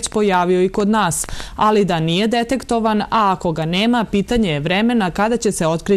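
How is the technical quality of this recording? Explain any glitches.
The recording has one clear glitch, right at the start. From 0.07 to 1.41 s there is a train of clicks: about seven near-identical pulses at an uneven pace averaging 5.2 per second, peaking roughly 5 dB above the sound. The likely cause is electrical interference or a faulty connection or power supply. They are heard as ticking over the audio. On a waveform they show as narrow spikes, and on a spectrogram as thin vertical lines spanning the frequency range.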